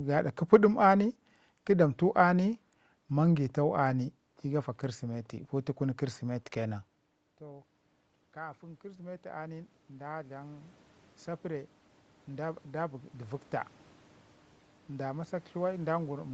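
Automatic gain rising, 4.81 to 13.51 s: judging the input too quiet, the gain control slowly adds about 14 dB, swelling speech and room noise together.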